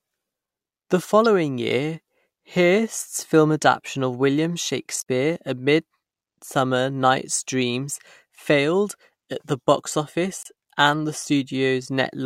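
At 1.25 s, just before "year hearst's film adaption", the speech breaks with a tiny blip. This is damaged data in a compressed stream. Part of the coded data is wrong, so the decoder misreads those frames and loses sync until it finds the next frame header. A second, longer glitch runs from 4.98 to 5.03 s. A third sits from 10.43 to 10.46 s, between "failed at the box" and "and the".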